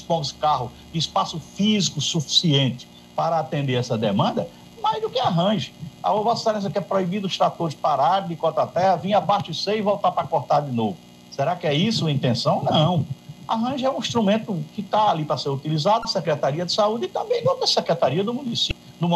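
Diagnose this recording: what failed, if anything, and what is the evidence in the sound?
The failure lies in the codec stage: damaged data in a compressed stream. Brief glitches of about 30 ms sound at 16.02–16.05 s and 18.68–18.71 s, where the decoder misreads corrupted frames and resynchronises on the next header.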